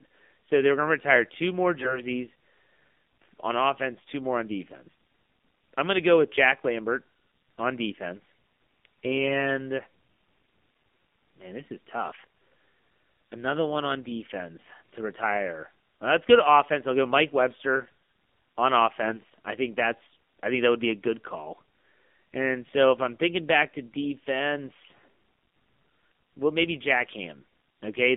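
The whole clip runs through the AMR narrowband mobile codec. The speech sits between 200 Hz and 3.6 kHz and sounds buzzy and synthetic, which fits AMR-NB at around 7.4 kbps. Short bursts of AMR bit errors at 1.78–2.01 s (after "retire two more"), 9.03–9.32 s and 19.06–19.34 s (before "I think that's I") garble the fine frame detail, so the voice holds its pitch but turns hoarse and gargly.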